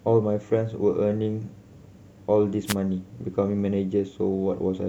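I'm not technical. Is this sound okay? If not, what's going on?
No, there's a wireless microphone noise hit at 2.65 to 2.75 s: the radio signal briefly faded, so a quick burst of static swished over the speech.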